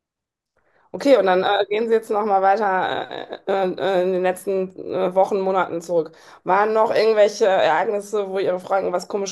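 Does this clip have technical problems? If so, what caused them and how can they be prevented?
No, nothing in this speech clip points to a technical problem, so there's no cause to track down and nothing that needs preventing.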